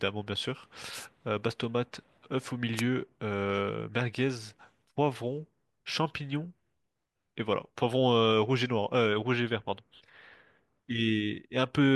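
Wireless microphone noise hits occur at 0.91 to 1.07 s and again at 2.76 to 2.82 s. The analogue FM radio link fades briefly as reflected signals cancel, and the receiver's hiss swells through the speech. Each is heard as a short burst of static.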